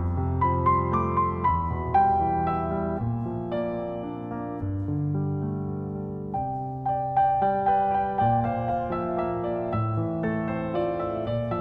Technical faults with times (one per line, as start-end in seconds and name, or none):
none